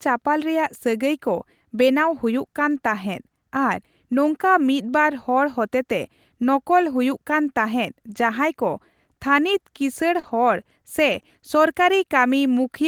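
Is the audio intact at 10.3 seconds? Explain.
No, not quite. The damage ends just before 10.3 s, right after "ᱛᱷᱟᱹᱱᱤᱛ ᱠᱤᱥᱟᱹᱬ".

From 10.19 to 10.25 s there is short concealed packet loss. About 40 ms of the speech never arrived in time, so the receiver extrapolated the preceding sound to cover the hole and then crossfaded back into real audio. It is heard as a brief smear or wobble.

Overlapping it, from 10.23 to 10.29 s, is a lost packet rebuilt from error correction. About 40 ms was restored from the low-bitrate redundant copy carried in the following packet, which fits two lost frames. There is no gap there, but the rebuilt stretch sounds rougher and noisier than the audio around it.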